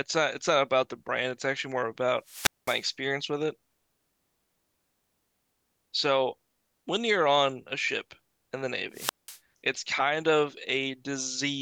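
A speech recording with two wireless microphone squelch dropouts, at 2.23–2.89 s and 8.92–9.39 s. In each, the FM radio link from the microphone weakens, hiss rises briefly, and then the receiver's squelch mutes the output entirely for about 0.21 s in the first event and 0.19 s in the second before the signal recovers and the audio returns. The result is an abrupt hole of near silence.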